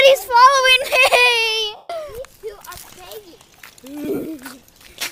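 Lost LE Audio frames hit twice. From 1.76 to 1.90 s about 135 ms goes missing, and the LC3 decoder fills the gap by replaying the last spectrum with random signs, fading it, so tones smear into noise. Around 4.04 to 4.25 s, 105 ms drops out in scattered bits, the longest around 50 ms.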